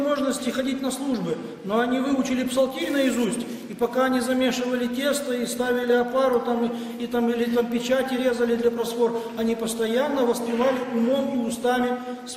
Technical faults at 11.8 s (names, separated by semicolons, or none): none